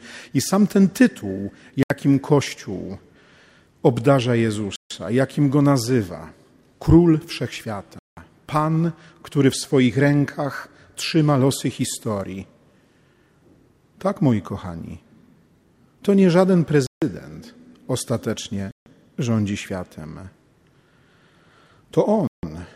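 The sound drops to brief silence six times, at 1.83 s, 4.76 s, 7.99 s, 16.87 s, 18.71 s and 22.27 s, each gap lasting 74 to 180 ms before it resumes. These are likely Bluetooth stalls: interference delayed packets, the receiver's buffer emptied, and playback waited for retransmissions.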